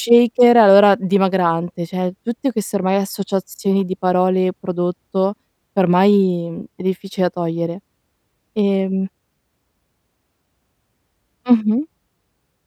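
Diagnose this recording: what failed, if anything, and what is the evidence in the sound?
Nothing in this speech recording points to a failure at any stage of the chain. There is no audible evidence to trace to the wiring, the converter, the buffering, the codec, the network or playback.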